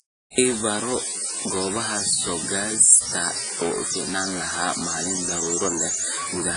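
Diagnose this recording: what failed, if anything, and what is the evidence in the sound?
Throughout the speech, a noise rides on the signal and carries into the pauses. This is likely a stuck data bit at the converter or its wiring, knocking about half the samples off by that bit's weight.

The whole clip rings and sounds washy, with hiss breathing along with the speech and nothing above 10.1 kHz. This points to heavy codec damage, likely WMA compression at a low bitrate around 24 kbps.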